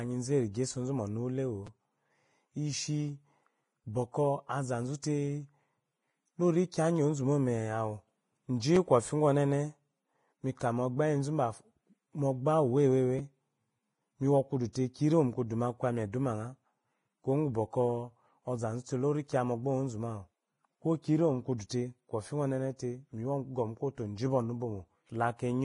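It's a speech clip with heavy codec damage throughout: hissy, grainy treble and nothing above 10.6 kHz, likely Vorbis compression at a low bitrate around 26 kbps. There are three repeated buffer stutters, short clicky buzzes where a 5.8 ms chunk replays. That fits a 256-sample buffer. At 1.67 s it plays twice extra, losing roughly 10 ms, and at 8.76 s and 13.19 s it plays once extra, losing about 5 ms each. There's also pre-echo, a short hiss smearing ahead of attacks, at 6.71 to 6.74 s (22 ms) and 14.73 to 14.75 s (25 ms) just before "kiyi irimo mukuduma".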